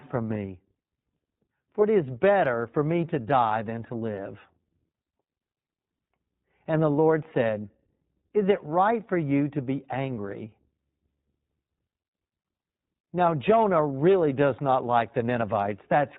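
Speech clip carrying iLBC codec damage throughout, plainly audible as a rough, synthetic texture with nothing above 4 kHz. Each frame's excitation is coded independently of the previous one; the sound fits 20 ms frames in the 15.2 kbps mode.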